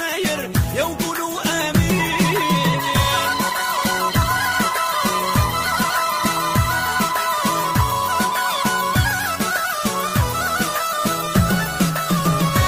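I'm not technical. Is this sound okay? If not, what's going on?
No. From 0.64 s to the end there is a regular tick roughly every 0.72 s. These are clock drift buffer slips. Two devices likely keep slightly different time, so a tiny slice of sound keeps getting dropped or repeated.

Between 2.88 s and 6.39 s the sound turns rougher and more muffled. This is a call bitrate drop. The connection seemed weaker, so the call squeezed the sound into less data, losing detail and crispness until it recovered.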